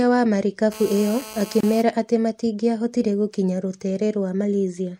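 A 2G phone transmitting nearby during a call had its radio bursts rectified by the audio circuitry, so from 0.72 to 1.82 s the speech carries a GSM phone buzz: a steady, hard, raspy tone at 217 Hz, rich in harmonics, sitting about 16 dB below the speech. Separately, pieces of the recording were encoded on their own and joined without trimming the encoder's start delay and end padding, leaving a gap at a join of encoded pieces: at 1.61 s the speech drops into a 28 ms gap with smeared edges, then resumes exactly where it stopped, under the buzz.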